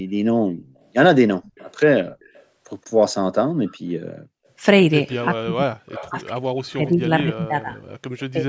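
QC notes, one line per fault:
0.77–0.85, 1.44–1.76, 2.2–2.45, 3.66–3.9, 5.1–5.25 s: echo leak. A faint copy of the speech returns 168 ms late, ranging from about -40 to about -20 dB relative to the speech. This is likely residual loudspeaker pickup that the far end's echo canceller missed.
5.9–6.09 s: echo leak. This is the strongest echo, at about -15 dB and delayed 273 ms.
5.27–7.79 s: speech suppressed in double talk. About 2 s of the speech is ducked intermittently, dropping by up to roughly 40 dB. This is likely the canceller attenuating both talkers while they overlap.
8.32–8.47 s: speech suppressed in double talk. There is a brief dip of roughly 20 dB, likely the same overlap-triggered suppression.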